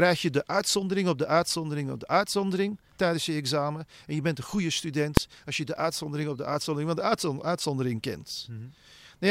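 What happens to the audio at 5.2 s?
At 5.17 s, right after "je bent een goede" and before "als je de uitzondering", the speech is hit by invalid numbers at full scale. A calculation produced infinite or invalid values that were clamped to the maximum sample level for one very short block of about 1.45 ms, which fits a 64-sample block. Because the block is so brief, it sounds like a single sharp bang. On a waveform it shows as a thin flat block at one extreme, far beyond the speech peaks, and on a spectrogram as a bright vertical line spanning all frequencies.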